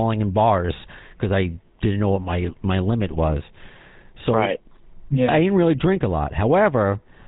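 From start to end the speech carries GSM full-rate codec damage: a buzzy, gravelly roughness from coarse pulse excitation, with a spectrogram that is empty above 3.8 kHz and a rate that fits 13 kbps.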